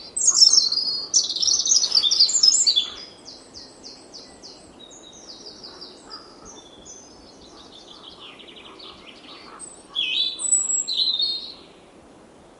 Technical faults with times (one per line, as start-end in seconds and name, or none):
none